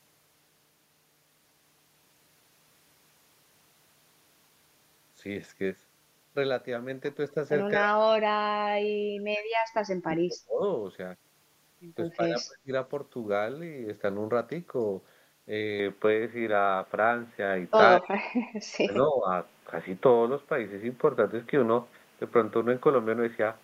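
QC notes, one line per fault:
7.77–10.62 s, 12.16–12.71 s, 17.99–18.32 s, 18.84–18.91 s, 19.10–19.28 s: speech suppressed in double talk. The speech level collapses in chunks, deepest in the first and longest stretch at about 40 dB down, then about 25, 30, 25 and 10 dB in the shorter later dips. The likely cause is an echo canceller meeting simultaneous far-end talk. Unable to separate the near talker from loudspeaker echo, it attenuated both. The last three dips fall after the input change.
15.79 s to end: input switched to a poorer device. At 15.79 s the sound turns abruptly dull and boxy with no gap at the transition. The level shifts by about 5 dB, and a new noise floor appears about 40 dB below the speech. The narrow band and changed tone and noise point to a likely switch to another microphone or a headset call-profile input partway through recording.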